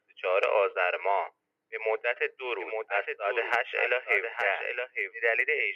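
From 2.60 s to 5.14 s a second copy of the audio runs about a second behind the first, a few decibels quieter, so every sound returns as a flat, full-range repeat. It has no decay or room colour, and it starts and stops abruptly. This doubled audio track is likely the same signal mixed in twice, either picked up again through a slower path or left as two out-of-step copies by an edit.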